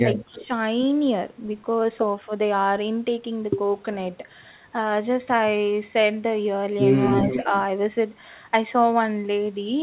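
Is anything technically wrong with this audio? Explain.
Yes, there are two kinds of fault, both typical of a hands-free call.

Speech suppressed in double talk: the level sags at the very start, a shallow dip of roughly 5 dB from 0.02 to 0.08 s, then drops harder, by around 15 dB, from 0.26 to 0.53 s, so the speech sounds ducked and partly swallowed. The likely cause is an echo canceller hearing both sides at once. Unable to tell its own talker from loudspeaker echo, it turned everything down.

Echo leak: from 0.34 to 0.45 s a faint delayed copy trails the speech, about 20 dB below it and 266 ms late. From 7.14 to 7.6 s a much louder copy appears, only about 5 dB down, arriving 300 ms behind. This is likely a loudspeaker on one side whose canceller failed to remove what its microphone picked up, so the talker's own sound returned. The audio throughout has nothing above 4 kHz, which fits a narrowband G.711 call path.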